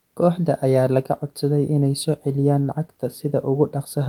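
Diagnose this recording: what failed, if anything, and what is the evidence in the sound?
Nothing failed: no stage between capture and playback leaves an audible mark on the speech, so there is no fault evidence to cite.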